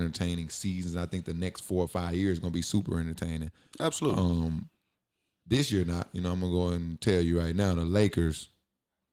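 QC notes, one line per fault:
Nothing stood out on listening to this speech clip.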